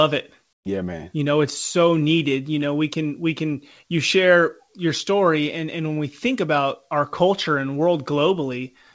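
From 0.53 to 0.65 s, the background is replaced by comfort noise for about 120 ms. The real room sound drops out. A flat, featureless hiss stands in for it, about 19 dB quieter than what came before. The background already sits about 51 dB below the loudest parts. The likely cause is discontinuous transmission. The sender stopped sending audio in the pause, and the receiver filled it with synthetic noise. Throughout, nothing is heard above 8 kHz, which fits a G.722 call codec.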